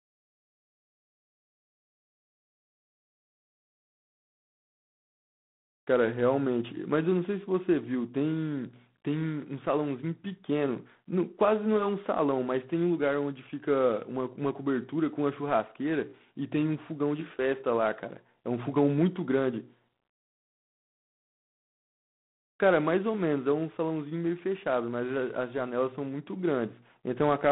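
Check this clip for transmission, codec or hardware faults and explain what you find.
The speech has passed through a G.726 ADPCM codec for its whole length. The codec sends only a few bits per sample describing how each sample differs from an adaptive prediction, rather than the waveform itself. Here the coding is coarse enough to point to the 24 kbit/s rate, so quantisation error is plainly audible as a harsh, rasping hiss that rises and falls with the speech. The telephone-style band runs from 150 Hz to 3.5 kHz, with nothing above 3.8 kHz.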